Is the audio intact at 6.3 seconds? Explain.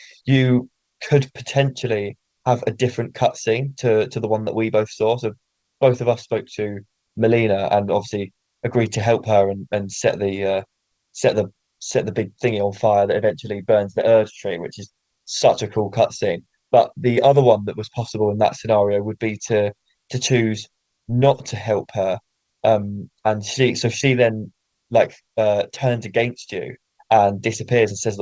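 No. At 6.3 seconds the audio sits inside a stretch affected by clock drift between sender and receiver. The sender's clock runs faster than the receiver's, by about 4 percent, so samples arrive more quickly than the receiver plays them out and its jitter buffer keeps filling. The mismatch is constant, but the receiver does not absorb it smoothly; it has to shed the surplus in small steps, which leaves the timing of the speech slightly uneven.

Those steps are the repeated timing corrections, which run from 0.21 to 28.10 seconds and therefore include 6.3 seconds. To keep pace with a source running at 104 percent, the receiver repeatedly drops short slices of speech, always cutting and never repeating, at uneven intervals. Each cut is small rather than an obvious gap, all passing through a call band that carries nothing above 8 kHz.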